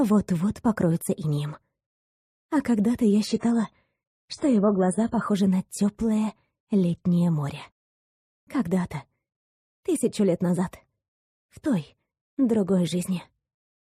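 An adaptive stream switched to a lower bitrate from 3.27 to 5.27 s, abruptly removing everything above 10 kHz and adding grainy codec artefacts, with no gap.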